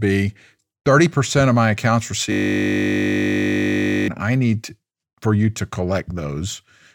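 From 2.32 to 4.08 s, a system hang loop occurs. The computer or driver stalled while the sound hardware kept replaying one 20 ms stretch of its ring buffer. Repeating at 50 Hz, that fragment becomes a steady buzz, and roughly two seconds of speech are lost.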